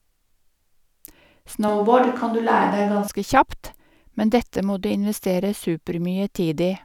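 From 1.68 to 3.08 s the speech abruptly turns roomy, hollow and bass-light, with room noise about 35 dB down: likely a switch to a distant microphone.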